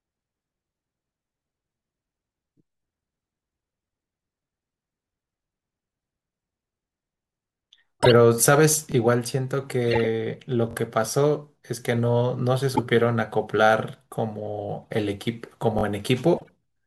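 Corrupt frame decoded at 8.00 to 8.11 s: damaged compressed frames were played anyway, and their misread gains and codes put energy at the wrong frequencies. The result is a short burst of chirpy noise lasting a handful of frames. Repeated buffer at 8.92 s: new audio arrived late, so the last block, about 21 ms long and consistent with a 1024-sample buffer, played once more. This produces a brief buzz with a hard join.

Corrupt frame decoded at 9.87 to 10.06 s gives a longer squeaky burst across several frames. Repeated buffer at 10.71 to 10.75 s: the same block sounds two extra times, a stuttering buzz with little or no audio lost.

Corrupt frame decoded at 12.73 to 12.79 s and 14.82 to 14.85 s produces quick blips. Repeated buffer at 15.79 to 15.83 s is another double repeat. Corrupt frame decoded at 16.36 to 16.50 s brings a final noisy chirp.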